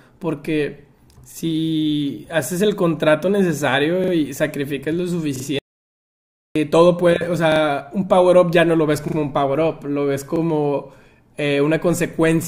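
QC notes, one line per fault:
1.32 s, 4.04 s, 5.36 s, 7.52 s, 9.08 s, 10.36 s: repeated buffer. At each point a 40 ms slice of the speech plays again immediately. It repeats once at 1.32 s and 10.36 s and twice at the other four points, so each event lasts 40 to 80 ms. New audio arrived late, and the output device replayed its last block instead of going quiet. The hard joins between copies make a brief stutter. No audio appears to be skipped; each repeat just delays what follows.
5.59 to 6.56 s: audio dropout to silence. The speech cuts off mid-flow and about 0.97 s of silence follows, with no room tone or noise floor, before the sound resumes abruptly. Complete silence rather than a quieter signal points to the input path disappearing while the recorder kept writing samples, most likely a momentary disconnect or dropped link. Anything spoken during that second is unrecoverable.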